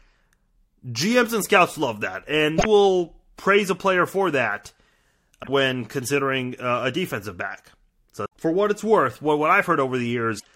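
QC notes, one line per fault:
2.55–2.66 s, 5.40–5.49 s, 8.22–8.33 s, 10.36–10.47 s: damaged data in a compressed stream. Each disruption lasts about 0.1 s and is heard as a chirp, squawk, click or short hole. The decoder cannot read the corrupted frames and must search for the next frame header before playback resumes.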